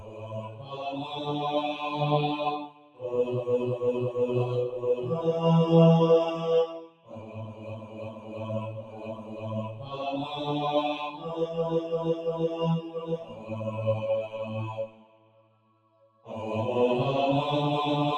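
A noise suppressor built for speech was left on across the whole clip, so the sound is treated as if it were noise. Level swings by roughly 15 dB. Attacks pass, but held sounds and tails sink, giving a pumping, thinning effect.

Sound cut by the noise suppressor is clearest in seven stretches: 0.0 to 0.79 s, 2.67 to 3.02 s, 6.8 to 8.37 s, 8.82 to 9.44 s, 9.69 to 9.96 s, 13.17 to 13.5 s, and 14.87 to 16.27 s. Sustained or decaying sound dips there, by about 7 to 12 dB.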